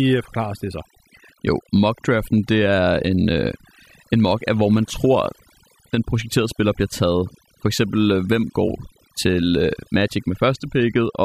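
From start to finish the speech carries overdone noise removal: a noise reduction stage was set far too aggressively, so any frequency band that dips near its noise estimate gets pulled right down or gated off, taking the softer parts of the voice along with the noise. The pauses collapse into near silence dotted with twinkling, chirpy specks, while the voice has its quieter detail stripped away.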